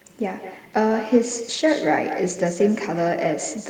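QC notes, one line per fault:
throughout, echo with no canceller: every phrase of the speech is trailed, around a fifth of a second later, by a distinct second copy about 10 dB down, sounding thinner than the original. The far end is replaying the call over a loudspeaker into its own microphone, and nothing cancels that return path. Unlike room reverberation, the copy is a discrete repeat after a clear gap, not a smooth decaying tail.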